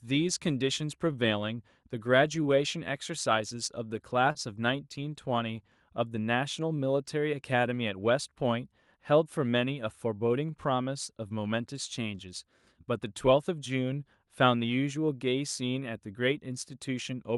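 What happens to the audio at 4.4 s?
The sound is held briefly, with a slight buzz or dip, from 4.32 to 4.38 s. This is a short stall from a late packet: the jitter buffer ran empty, so the receiver stretched the last sound by about 30 ms, then resumed without losing anything.

Around that moment there are also small timing hiccups from clock drift between sender and receiver. The sender's clock runs slightly slow, by roughly one and a half percent, so the buffer keeps draining and the receiver repeats short pieces.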